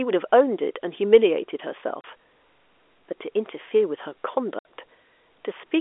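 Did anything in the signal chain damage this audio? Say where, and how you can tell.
Yes. Packet loss filled with silence, at the network stage: a 30 ms hole at 2.01 s and a 60 ms hole at 4.59 s cut the speech with hard edges. The second is twice the first, which fits one and two lost 30 ms packets, replaced by silence over the telephone-band G.711 line.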